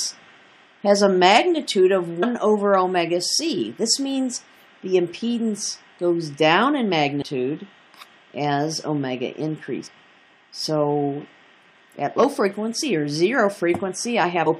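At 2.22, 7.21, 9.86 to 9.88, 12.18 and 14.46 s the audio breaks into a short chirp or squawk, each lasting about 15 to 20 ms. This is damaged data in a compressed stream: corrupted bytes make the decoder misread a frame and resynchronise on the next header. A plain dropout would be silence and a simple click a single sharp edge.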